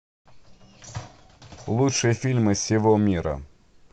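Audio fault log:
1.96 s to 3.92 s, Bluetooth SBC bit pool drop: halfway through the speech the sound turns dull and grainy and stays that way to the end. The encoder appears to have cut its bit budget sharply, which fits a fall from a bit pool of 31 to 13, about 94 kbps. With so few bits, the highest sub-bands get almost nothing, so the treble dulls, and the remaining bands are quantised coarsely enough to add a gritty noise floor.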